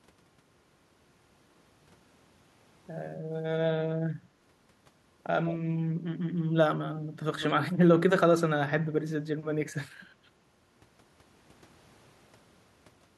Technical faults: echo leak

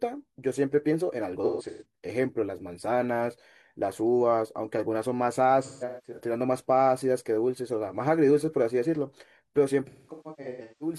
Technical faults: AAC frame loss with concealment

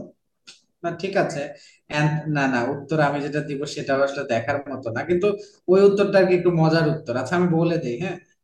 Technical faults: none

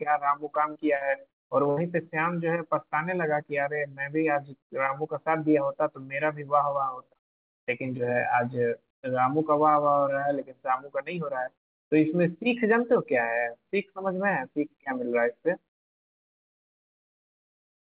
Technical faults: repeated packet loss (robotic sound)

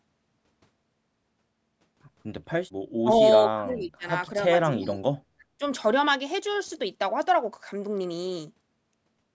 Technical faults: speech suppressed in double talk

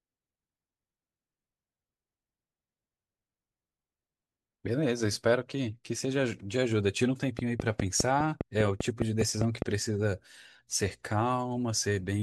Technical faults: train of clicks

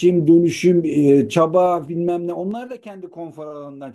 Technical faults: zipper noise

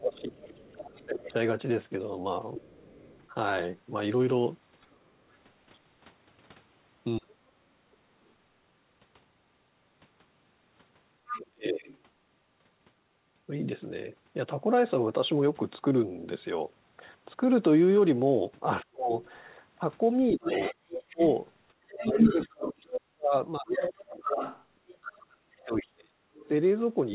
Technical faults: speech suppressed in double talk; other side's voice leaking through

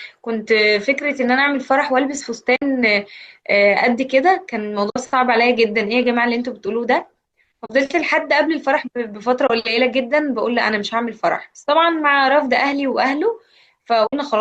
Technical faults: AAC frame loss with muting

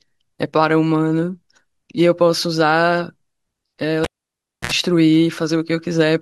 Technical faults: cable pulled and plugged in

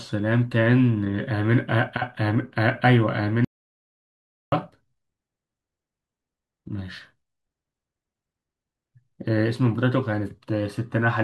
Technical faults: audio dropout to silence

